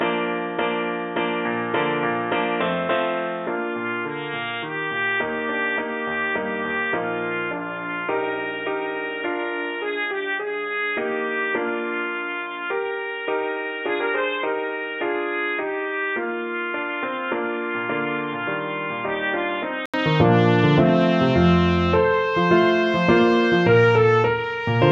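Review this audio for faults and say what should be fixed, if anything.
From 0 to 19.94 s the sound is dull, with nothing above 3.8 kHz, and roughly 10 dB quieter. At 19.94 s an 80 ms gap leads to fuller sound. This is likely an input switched to a poorer device. Lock the recording input to one microphone.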